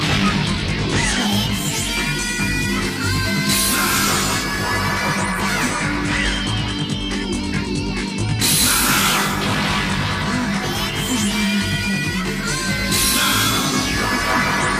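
Channel delay (comb filtering) runs through the whole clip: one channel arrives around 20 ms late, and summing to mono cancels shared content at evenly spaced frequencies, from about 30 Hz upward, leaving the sound rough and slightly doubled.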